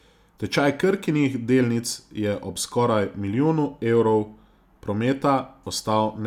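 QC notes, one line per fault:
No fault found in this speech clip.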